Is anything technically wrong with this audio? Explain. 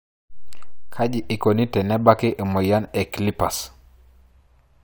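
No, nothing technically wrong can be heard in this speech recording. No fault turns up anywhere in it.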